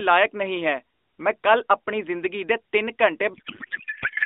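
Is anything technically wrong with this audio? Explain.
Yes. From 3.34 s to the end, a codec payload misread: octet-aligned AMR is unpacked as bandwidth-efficient, scrambling fields, so speech turns to garbled warbling noise.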